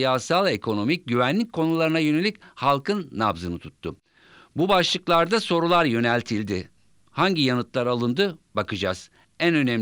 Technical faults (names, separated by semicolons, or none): resampler restarted on every block